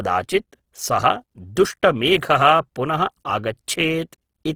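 Throughout the speech, the sound is plainly grainy and rough, with noisy fizz replacing fine detail. This is likely Opus compression in its music mode, at a starved rate that fits about 16 kbps. Unlike MP3, it swirls less, because starved bands are filled rather than emptied.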